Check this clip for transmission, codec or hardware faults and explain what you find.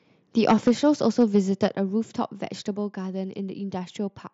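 Two faults show up in the speech, both on the capture side, while the Bluetooth mSBC headset link carries it with nothing above about 7.8 kHz and only light grain.

Microphone overload, 0.47 to 0.89 s and 1.19 to 1.66 s. The input is likely set too hot, so peaks run past the converter's ceiling, about 8 dB over in the first stretch and about 2 dB in the second. A few percent of samples, then a smaller share, are flattened, giving loud syllables a harsh, crackly edge.

Microphone volume stepped down, at 0.68, 1.68 and 2.76 s. The call software likely sees the overload and cuts the device's input gain in single jumps of about 4, 5 and 3 dB. Voice and background drop together abruptly, the first two coming right on the distorted peaks.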